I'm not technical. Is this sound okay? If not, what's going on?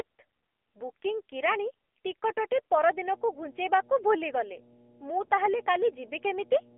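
No. The speech went through an AMR narrowband mobile codec, the squeezed format older phone networks use. It keeps only the band from 300 Hz to 3.4 kHz and rebuilds the voice from a simple model, so the whole clip sounds thin, muffled and noticeably buzzy and synthetic.

From 2.91 s to the end, electrical interference from the power supply, likely a ground loop, leaked in as mains hum: a steady low drone at 60 Hz sitting fairly loud under the voice rather than faint in the background.

At 5.26 to 5.30 s there are lost AMR speech frames. A burst of radio errors spoiled the data, which points to a single missing 20 ms frame. The decoder patched the gap by guessing, so you hear a brief dip or wobble.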